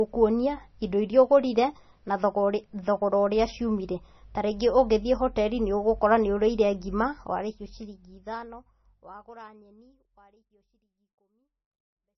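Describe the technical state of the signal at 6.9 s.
At 6.9 s the speech has heavy MP3 compression damage, running the whole clip. The likely cause is a low bitrate around 24 kbps: starved of bits, the encoder drops weak frequency bands frame to frame and cuts everything above 6 kHz, so it sounds watery, swirly and dull. The smooth fade-out only starts around 7 s.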